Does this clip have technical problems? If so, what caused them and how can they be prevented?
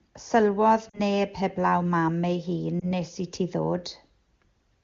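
Yes. There are lost AMR speech frames at 0.90–1.00 s and 2.80–2.90 s. The first dropout sounds like about 40 ms of missing audio, which fits two 20 ms frames. The second is shorter, about one frame. When a frame fails its checksum after radio errors, the decoder repeats the last good pitch and vocal-tract settings at reduced gain. In the first dropout the sound fades to near silence over the two frames. In the second it gives a brief warble or dip. Each time the voice comes back weak or rough for a moment. The wideband coding itself sounds clean, which points to a high AMR-WB rate. To prevent this, improve the radio link or add stronger channel protection and retransmission so fewer frames arrive corrupted.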